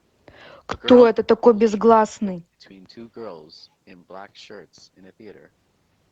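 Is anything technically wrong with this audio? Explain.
Yes, two faults are audible in this speech clip.

Speech suppressed in double talk, from 1.09 to 2.63 s. The speech dips and breaks up in pieces, for about a second in total, with the deepest cuts around 40 dB down. The likely cause is an echo canceller that met simultaneous talk from the far side. It could not tell the near talker from loudspeaker echo, so it pulled both down together, carving gaps out of the speech.

Lost packet rebuilt from error correction, at 1.45 s, inside that suppressed stretch. One 20 ms packet went missing, and the decoder filled it from the lower-bitrate copy carried in the following Opus packet. There is no silence, but that brief frame sounds rougher and noisier than the audio around it. Because this call path already stops at 8 kHz, the rebuilt frame has no missing top end, only the coarser coding.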